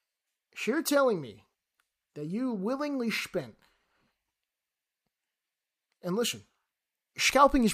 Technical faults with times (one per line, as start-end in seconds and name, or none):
none